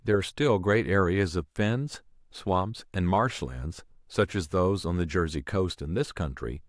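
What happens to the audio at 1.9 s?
Nothing goes wrong at 1.9 s: the speech runs on intact through that moment, with no dropout, click, distortion or other audible fault.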